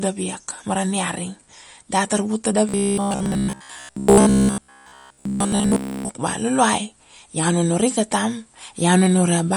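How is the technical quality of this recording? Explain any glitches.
The technical quality is poor, with two faults: compression damage across the whole recording and a mechanical buzz in the middle section of the speech.

Throughout the clip there is plainly audible damage that points to MP3 compression as the likely cause, consistent with a low bitrate around 48 kbps. Starved of bits, the encoder discards the high band and drops faint spectral detail that then flickers in and out between frames, producing a watery, swirling texture and dulled, smeared consonants.

From 2.69 s to 6.09 s the speech turns into a rigid, metallic drone pitched at 66.7 Hz. The likely cause is robotic sound from repeated short buffers. Fresh audio is arriving too slowly, so playback fills the gaps by looping the last fragment, and most of this stretch is repeated material rather than new signal. A 66.7 Hz pitch fits a fragment of about 15 ms being replayed, and that fixed repetition rate leaves a buzzy, machine-like tone that only loosely tracks the speech.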